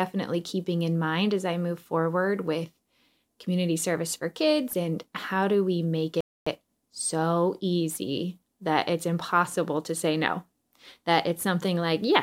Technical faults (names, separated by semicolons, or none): Bluetooth stall